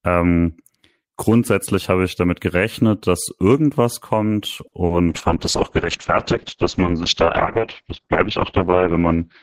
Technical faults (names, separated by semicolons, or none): short stall from a late packet; short concealed packet loss; call bitrate drop